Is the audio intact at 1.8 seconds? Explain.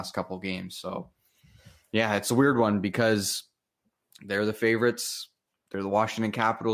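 Yes, the speech at 1.8 seconds is intact, with no audible fault at that moment.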